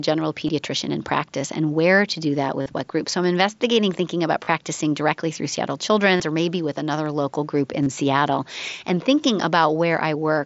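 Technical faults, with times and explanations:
0.47, 2.62–2.66 (between "where to do that" and "what group"), 4.44–4.48, 6.16–6.20, 7.83–7.87 s: concealed Bluetooth headset packet loss. Headset packets drop for 15 to 45 ms, and the phone fills each gap by repeating recent waveform, leaving brief buzzy holds and a small warble on return.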